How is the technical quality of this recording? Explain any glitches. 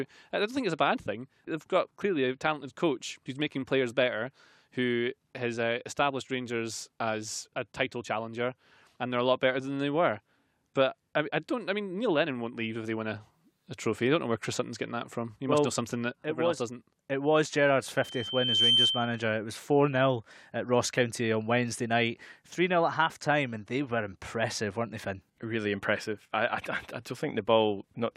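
One glitch stands out in the speech. From 17.96 to 19.26 s, loudspeaker feedback squeal: the microphone picks up its own loudspeaker, and a 3.1 kHz tone builds over under a second to a few dB above the speech. That swelling growth distinguishes it from a steady interfering whistle.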